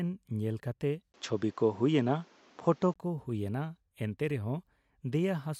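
Input switched to a poorer device from 1.12 to 2.96 s, after "ᱧᱮᱞ ᱠᱟᱛᱮ": a 20 ms gap, duller speech cut above 7.7 kHz, likely another microphone.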